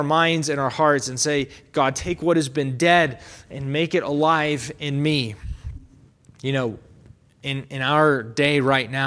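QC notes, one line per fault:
No faults found.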